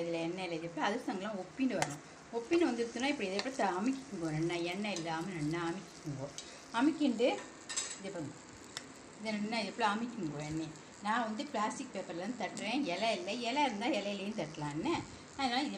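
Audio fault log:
0.61 s, 2.55–2.62 s and 8.60–8.63 s, corrupt frame decoded: damaged compressed frames, a few at a time, were decoded anyway, and the misread codes scatter energy into the wrong frequencies. Each event is a brief chirp or noise blip, faint at 0.61 and 8.6 s and quite loud around 2.6 s.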